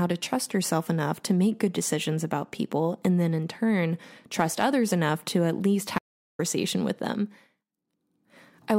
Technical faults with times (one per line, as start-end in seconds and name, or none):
5.99-6.39 audio dropout to silence